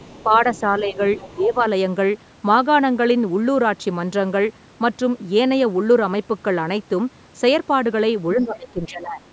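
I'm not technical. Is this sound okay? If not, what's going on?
No. Other side's voice leaking through, at 0.00–0.23, 0.54–0.60 and 1.17–1.34 s: a faint second voice sits quietly under the speech. The likely cause is the talker's device playing the other side through a loudspeaker, with the echo canceller missing some of it.

Speech suppressed in double talk, at 0.24–0.40, 0.71–0.99, 1.28–1.64 and 8.35–9.21 s: the speech briefly dips in volume, slightly at first, more deeply later, and the last stretch is the longest. Both sides likely talked at once, so the canceller turned everything down.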